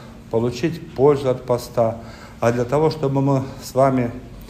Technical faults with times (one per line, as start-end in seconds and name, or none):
none